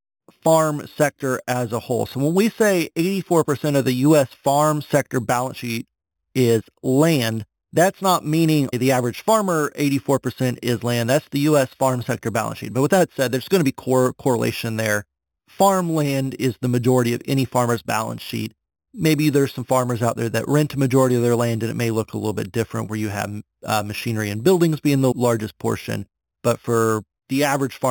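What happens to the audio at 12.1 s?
Imaging from sample-and-hold upsampling is present at 12.1 s, as it is through the whole clip. The speech appears to have been raised from a low rate, which fits an 8 kHz original brought to 44.1 kHz, by holding each sample with no smoothing filter. A mirrored copy of the spectrum lands between 4 kHz and 8 kHz at about 17 dB below the speech. It is heard as a bright metallic fizz that rises and falls with the speech and moves opposite to its pitch.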